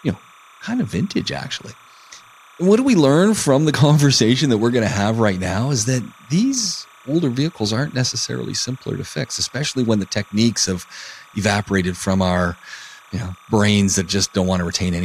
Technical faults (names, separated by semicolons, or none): timecode bleed